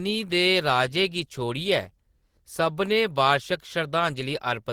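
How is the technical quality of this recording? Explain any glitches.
No technical faults can be heard anywhere in the recording; the signal stays intact and steady throughout, with nothing to explain.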